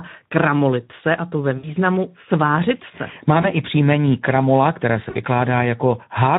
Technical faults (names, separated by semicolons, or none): Speex codec; VoIP packet loss concealed by the speech codec